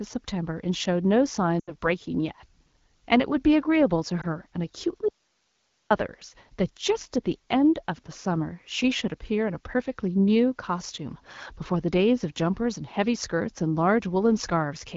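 At 1.60 to 1.75 s there are lost AMR speech frames. The 80 ms run fits four 20 ms frames failing their checksum. The decoder extends the last pitch and vocal tract shape with falling gain, so the speech drops to near silence within two frames. A spectrogram shows harmonics frozen flat and dimming. A single lost frame at 4.21 to 4.26 s gives only a brief warble.

From 5.09 to 5.91 s there is an audio dropout to a faint residue. The speech cuts off abruptly for 820 ms, leaving hiss about 45 dB down. This is likely because the signal was lost while the path stayed live. The waveform collapses to a thin noise band with sharp edges, and the spectrogram shows faint, even broadband noise until the AMR-WB content up to 6.4 kHz returns at once.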